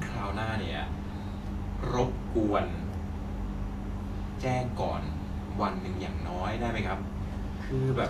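Speech throughout, with plainly audible codec damage, likely from Vorbis compression at a low bitrate around 33 kbps. Unlike a plain low-pass, which stays clean, nothing reaches above 14.2 kHz and the treble below that turns grainy and hiss-like, with blurred attacks.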